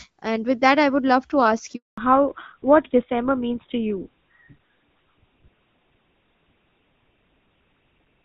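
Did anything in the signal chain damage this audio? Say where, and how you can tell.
Yes. A handover gap at the network stage runs from 1.76 to 1.98 s, right after "would love to ask": 220 ms of silence while the call switched networks and no speech frames arrived.

A fallback to narrowband at the codec stage starts at 1.98 s and lasts to the end. The earlier wideband sound, which fits HD Voice, is lost. Nothing remains above 4 kHz, so the speech sounds duller and rougher, which fits GSM full rate.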